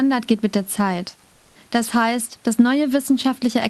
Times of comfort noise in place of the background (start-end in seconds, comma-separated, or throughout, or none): 1.33-1.51